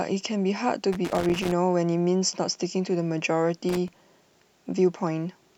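It's a speech clip with two bursts of loose connector crackle, one from about 0.93 to 1.52 s and a shorter one from 3.69 to 3.88 s. Both sound like irregular scratchy spitting laid over the audio, the typical sign of a worn or dirty contact that keeps making and breaking as the cable or plug shifts. Each dropout chops the signal, and any DC sitting on the line turns those breaks into little pops.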